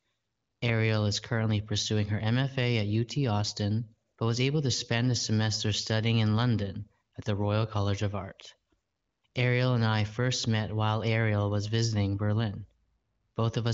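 The speech carries the band-limited sound of the AMR wideband (HD Voice) codec, with nothing above 7.5 kHz and little or no audible coding roughness, which fits one of the codec's higher rates around 18 kbit/s, and no technical fault can be heard.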